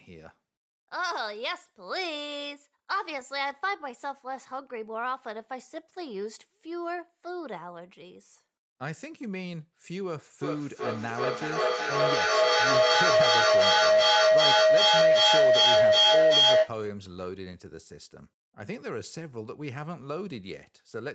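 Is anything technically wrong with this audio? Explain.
Yes. From 10.41 to 16.83 s there is feedback howl. A microphone picks up a loudspeaker playing the same call, so each trip round the loop gains level. Repeats pulsing roughly every 400 ms narrow to a tone near 700 Hz, peaking about 13 dB above the speech.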